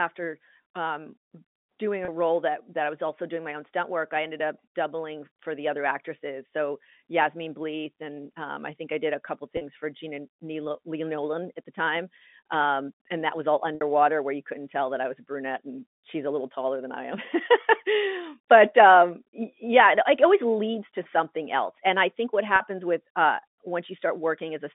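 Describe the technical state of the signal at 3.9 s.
At 3.9 s the signal is intact, with no fault present, and it carries the narrow band of G.711 telephone coding, which passes roughly 200 Hz to 3.6 kHz.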